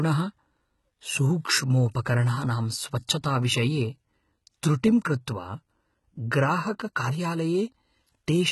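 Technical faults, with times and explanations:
Throughout, HE-AAC compression: the speech has nothing above about 11.8 kHz, and its upper band sounds synthetic, with s sounds coming out gritty and lispy and a metallic sheen on the treble. This is likely spectral band replication. Only the lower spectrum is actually coded, and the top is patched in from copied lower bands under a coarse envelope, so its harmonics do not line up with those below. The heavy damage fits HE-AAC v2 at roughly 16 kbps.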